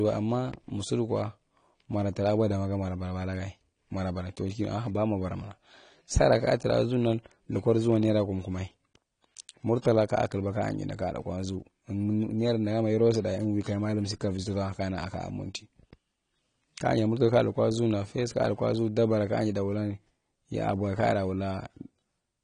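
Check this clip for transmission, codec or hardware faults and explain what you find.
One codec fault runs through the whole clip. The speech sounds dull and smeared, with a watery, fizzy texture on sibilants and nothing above 10.1 kHz. This is likely AAC compression: AAC-LC at a low bitrate, plausibly around 32 kbps, dropping and crudely quantising upper frequency bands.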